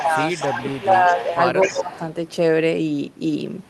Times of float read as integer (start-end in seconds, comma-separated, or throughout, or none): none